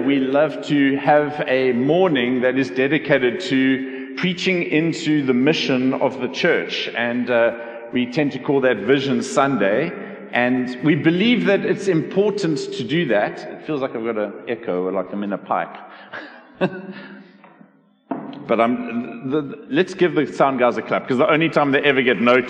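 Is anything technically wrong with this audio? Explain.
No, nothing technically wrong can be heard in this audio. There are no faults to point to anywhere in the clip.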